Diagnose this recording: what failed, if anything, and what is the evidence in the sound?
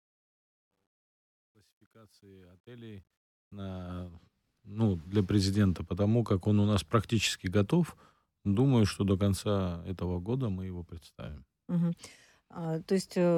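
Truncation distortion on a fade, 0.0 to 4.09 s, worst from 0.0 to 2.62 s. At the sample-format or gain stage, the fade-in discards low bits without dither, which points to about 11-bit resolution. The quiet start sounds gritty until 4.09 s.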